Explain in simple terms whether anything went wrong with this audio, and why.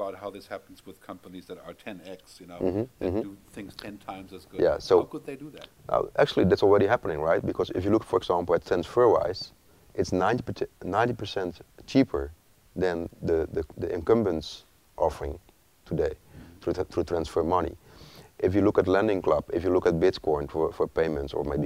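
Nothing went wrong with this audio, so there is no fault to explain.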